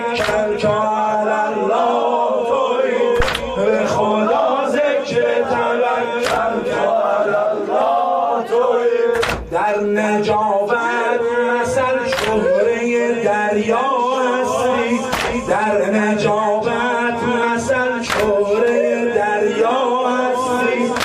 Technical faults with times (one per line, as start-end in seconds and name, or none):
3.20-3.29 phantom power thump